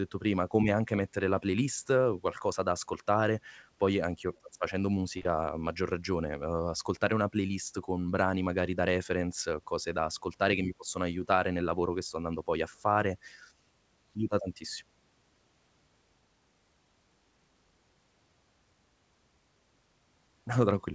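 Short concealed packet loss occurs at 4.37 s, 4.38 to 4.41 s, 5.18 to 5.21 s and 5.22 to 5.26 s, just before "a maggior ragione uhm". Missing packets were patched by extending the previous sound, leaving brief smears.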